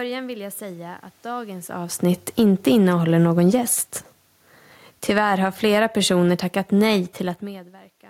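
Speech with audible automatic gain control pumping. The automatic gain falling twice, after "jag säga att dagens" from 2.04 to 4.29 s by about 5 dB and from 4.94 to 5.39 s by about 9 dB, makes the voice and room noise sink together. The automatic gain rising, from 2.82 to 3.76 s by about 4 dB and from 5.3 to 6.2 s by about 6 dB just before "tackat nej", makes the voice and background swell back up in step. The level shifts near 1.5 s and 7.0 s are the talker moving relative to the microphone, not a gain fault.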